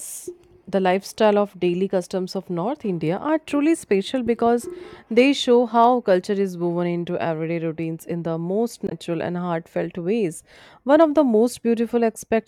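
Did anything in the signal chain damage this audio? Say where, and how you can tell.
Yes: a brief disturbance from 8.85 to 8.92 s is damaged data in the compressed stream. Corrupted bytes made the codec's decoder misread frames before regaining sync.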